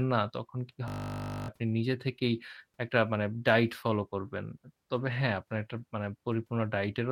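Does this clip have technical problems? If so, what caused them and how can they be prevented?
Yes. From 0.88 to 1.48 s there is a system hang loop. The computer or audio driver stalled, and the sound hardware kept replaying the same 20 ms slice of its ring buffer. That slice repeats 30 times at 50 Hz, so the speech gives way to a steady, flat buzz, and about 0.7 s of real audio is lost. Prevent it by running audio at real-time priority and fixing the driver or system stalls that stop the buffer being refilled.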